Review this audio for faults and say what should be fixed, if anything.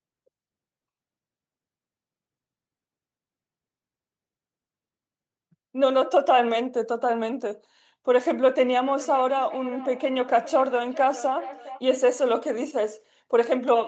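Feedback echo between two devices appears from 8.86 to 11.86 s. The speech returns at a steady spacing of roughly 0.4 s, peaking about 17 dB below the direct speech. A second device is replaying the call into a microphone whose echo canceller cannot remove audio it did not play. To prevent it, mute or use headphones on one of the co-located devices.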